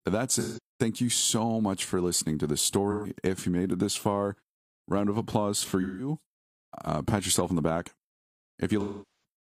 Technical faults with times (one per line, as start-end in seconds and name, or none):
0.39-0.59 AAC frame loss with concealment
2.91-3.12 AAC frame loss with concealment
5.81-6.09 AAC frame loss with concealment
8.80-9.22 AAC frame loss with concealment